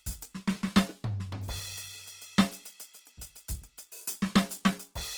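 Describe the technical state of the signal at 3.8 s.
At 3.8 s the music shows the grainy, rough texture heard throughout: tones sound noise-filled rather than swirly, without the spectral holes of MP3. This is likely Opus compression in CELT mode, near 16 kbps, filling starved bands with noise while keeping full bandwidth to about 20.2 kHz.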